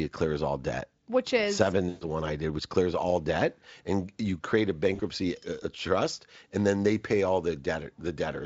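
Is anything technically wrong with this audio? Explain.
Yes. There are two dropouts from VoIP packet loss concealed by the speech codec. The first runs from 1.89 to 2.07 s, after "debt which is seven" and before "one I did which". The second runs from 4.95 to 5.01 s, after "and you create a".

The decoder filled the roughly 120 ms and 40 ms gaps by extending its last pitch and filter at falling gain, producing a fading buzzy tone or coloured noise. A spectrogram shows frozen, decaying harmonics, and the waveform shows a repetitive, shrinking envelope.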